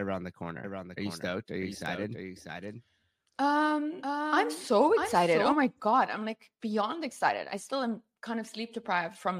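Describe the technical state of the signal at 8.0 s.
At 8.0 s the speech signal is intact, with no technical fault present at that moment.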